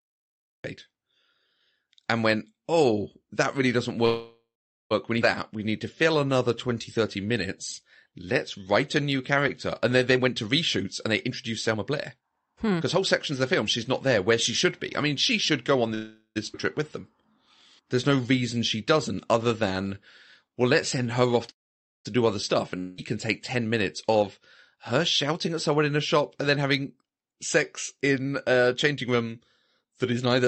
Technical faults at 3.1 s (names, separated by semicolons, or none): none